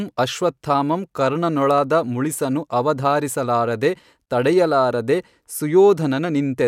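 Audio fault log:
No faults are heard in this speech recording. There is nothing to log against any point in it.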